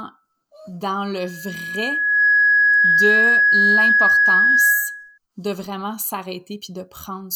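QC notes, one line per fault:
1.17–5.18 s, loudspeaker feedback squeal: a steady whistle at 1.7 kHz swells over roughly a second into a piercing tone sitting about 10 dB above the speech, holding until it breaks off just before "de vraiment". The microphone was picking up the loudspeaker it fed, and at 1.7 kHz the loop gain passed unity, so that single frequency kept reinforcing itself until the amplifier limited it or the loop was broken.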